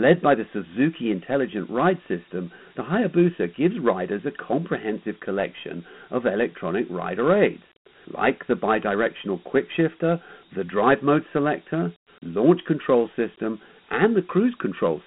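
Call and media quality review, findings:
Dialogic VOX ADPCM, whole clip: gritty hiss riding on the speech, band about 150 Hz to 3.4 kHz, spectrogram blank above 3.8 kHz, noise floor rising with each burst of speech. Coarse 4-bit OKI step adaptation, consistent with 32 kbps at 8 kHz sampling.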